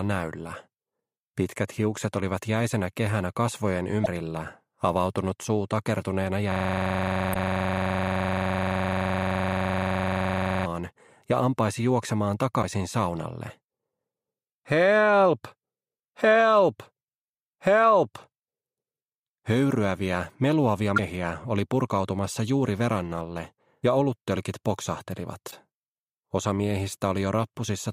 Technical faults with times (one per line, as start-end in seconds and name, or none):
4.02-4.07 damaged data in a compressed stream
6.52-10.66 system hang loop
7.31-7.36 damaged data in a compressed stream
12.59-12.64 damaged data in a compressed stream
20.94-20.99 damaged data in a compressed stream
25.48-25.53 damaged data in a compressed stream